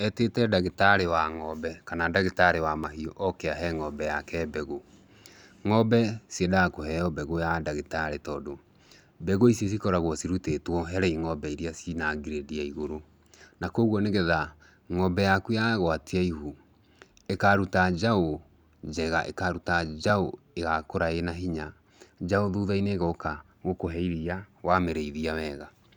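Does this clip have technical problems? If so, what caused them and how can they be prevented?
Yes. The capture software likely fell behind, so a dropped buffer (overrun) let the hardware overwrite samples before they were read. Roughly 1.5 ms of speech vanishes at 2.84 s and 20.10 s, each splice heard as a small jump. Giving the recording process higher priority and a larger buffer prevents this.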